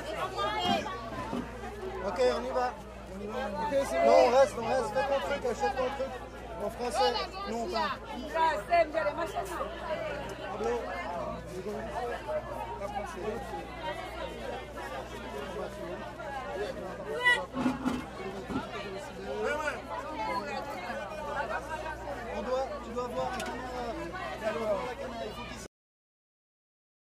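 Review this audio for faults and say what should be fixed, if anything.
At 25.66 s the sound stops dead in the middle of an event, with no decay or tail, and the remaining stretch to the end of the file is flat digital silence. This is a cut-off end: the final buffers of audio were never written out or played, so the recording truncates mid-sound instead of fading naturally. To prevent it, flush and drain all pending buffers before closing the file or stopping playback.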